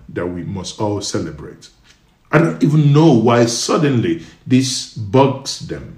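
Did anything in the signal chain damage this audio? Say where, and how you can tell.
Yes. A brief crackle from 5.15 to 5.22 s is hard clipping: peaks about 1 dB too hot hit the converter's ceiling and were flattened.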